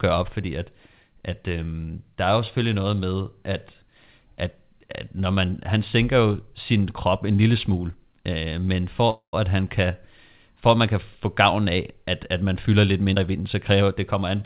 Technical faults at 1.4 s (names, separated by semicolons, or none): none